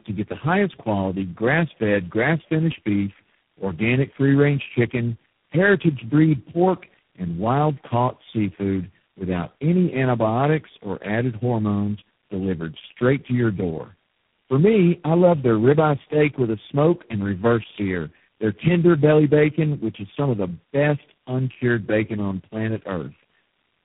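Speech suffers tandem speech coding throughout: rough, muffled and warbly, with nothing above 3.8 kHz. Unlike a single low-bitrate codec, the artefacts compound, roughness layered on roughness, which suggests about four separate speech codecs in a row, each re-encoding the previous one's degraded output.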